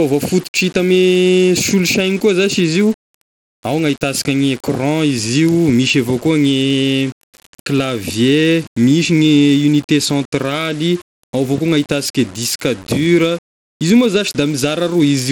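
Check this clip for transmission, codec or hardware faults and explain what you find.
Two faults run through the whole speech clip: coarse quantisation and heavy Bluetooth-style compression.

Low bit depth without dither, throughout: the grain suggests samples rounded to very few levels, which fits about 6 bits. The error tracks the speech, so quiet passages turn gritty and sputter. The noise sits roughly 25 dB below the signal. A waveform shows visible stair-steps, and a spectrogram shows a distortion haze that follows each syllable.

Bluetooth SBC compression, throughout: this is likely an SBC link at a starved bit pool, roughly 96 kbps. Weak upper sub-bands lose their bits and the rest are coarsely quantised, so the treble flickers and a gritty aliasing edge rides on the speech. A spectrogram shows blocky, patchy high bands and nothing above 19.6 kHz.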